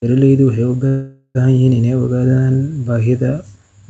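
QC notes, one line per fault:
0.87–1.37 s, call audio freeze: speech stalls and is stretched into a fading buzz, then resumes intact; likely a jitter buffer underrun, inserting about half a second of delay.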